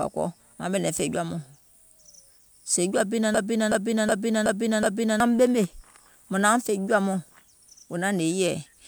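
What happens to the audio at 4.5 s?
A system hang loop runs from 3.34 to 5.20 s. The computer or driver froze while the hardware kept cycling one ring buffer, so a 0.37 s fragment (fitting a 16384-sample buffer) repeats five times at 2.69 Hz, a skipping-record repeat replacing about two seconds of speech.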